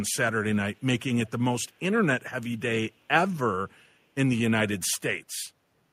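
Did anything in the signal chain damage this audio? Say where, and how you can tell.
Yes. Call processing shows an echo leak: faint scraps of the speech return 369 ms late at 0.76–0.83 s, 1.26–1.31 s and 1.71–1.79 s. On a spectrogram they appear as weak ghost copies of earlier harmonics, about 30 to 40 dB down, likely residue an echo canceller missed.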